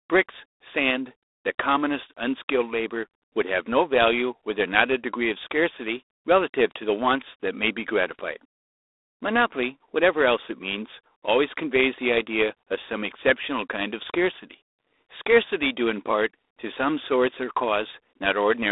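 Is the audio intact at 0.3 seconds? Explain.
No. At 0.3 s the speech carries G.726 ADPCM damage, and it runs through the whole clip. The codec sends each sample as a few bits describing how far it differs from an adaptive prediction. With so few bits, the quantisation error becomes a harsh, rasping hiss that rises and falls with the speech level. That roughness fits 24 kbit/s operation. The sound sits in a telephone band of about 300 Hz to 3.7 kHz, with nothing above 3.8 kHz.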